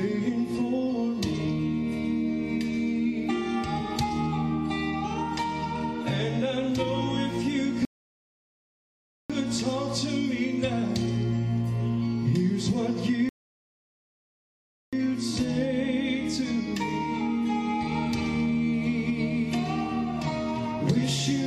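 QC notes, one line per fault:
7.85–9.30 s and 13.29–14.93 s, rebuffering stall: the sound halts into silence for about 1.45 s and then 1.64 s, then carries on from the exact point where it stopped. The player ran out of downloaded audio and waited for more. Unlike a dropout or packet loss, nothing is missing or skipped across the gap. The material is intact on both sides and the clip is simply longer by the time spent waiting.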